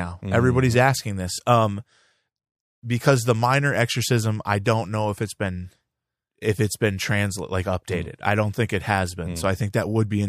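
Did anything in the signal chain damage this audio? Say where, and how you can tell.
Yes. A Bluetooth stutter on the wireless link between 1.35 and 1.39 s. The receiver lacked fresh data and replayed its last slice of about 23 ms, which fits a single lost packet. It sounds like a brief repeated slice of speech, after which the speech resumes slightly further on.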